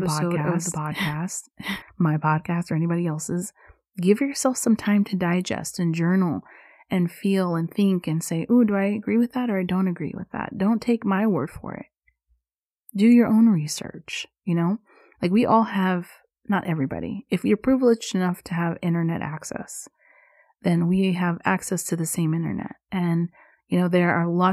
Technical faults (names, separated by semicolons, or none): doubled audio track